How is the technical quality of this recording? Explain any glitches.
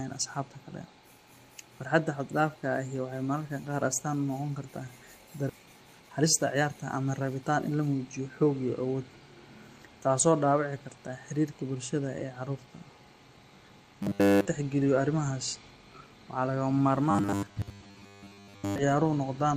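The recording has three kinds of playback glitch, all tied to how the audio was buffered on the way in.

At 5.49 s there's a skip ahead. About a second of speech is just gone, dropped while later audio was already queued, and the two sides are butted together with no gap or fill. You hear a sudden lurch forward mid-flow.

Right after, from 5.59 to 7.90 s, a jitter buffer speed-up kicks in. The receiver had too much audio backed up, so it kept trimming tiny pitch-period-sized slices, around 0.4 s in total. The speech runs at roughly 115% speed but keeps its pitch, so it sounds rushed.

From 14.03 to 14.46 s and again from 17.11 to 18.79 s, there's robotic sound from repeated short buffers. The voice turns into a rigid, metallic buzz at 100 Hz. In the first stretch it's all buzz, and in the second it's mostly buzz. The likely cause is audio arriving too rarely, with the player looping the last chunk, about 10 ms long, to fill the gaps.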